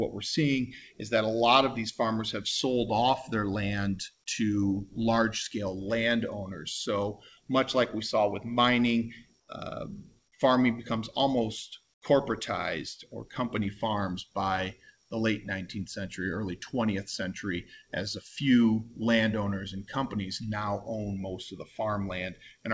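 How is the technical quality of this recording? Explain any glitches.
The recording has two short comfort noise in place of the background glitches. Nothing above 8 kHz comes through, consistent with the wideband call codec the audio passed through.

At 9.40 to 9.48 s and 11.94 to 12.02 s, 80 ms of quiet background, about 45 and 47 dB below the loud parts, turns into steady, featureless hiss, about 4 dB and then about 17 dB quieter. The likely cause is discontinuous transmission, with the receiver synthesising noise during pauses.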